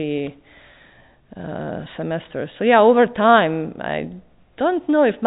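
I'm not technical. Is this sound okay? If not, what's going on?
Yes, nothing is wrong with this speech recording; it has the narrower sound of a standard landline phone call, with nothing above about 3.8 kHz, which is normal for that kind of line.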